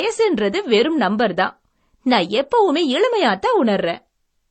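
Speech that has likely been through transcoding between lossy codecs, with a low-rate MP3-style encode followed by an HE-AAC-style one, runs the whole way through. Nothing remains above 9 kHz, and both codecs' artefacts are heard stacked together.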